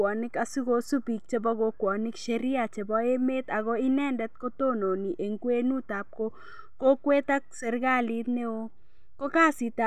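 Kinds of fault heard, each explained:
No technical faults are audible anywhere in the speech.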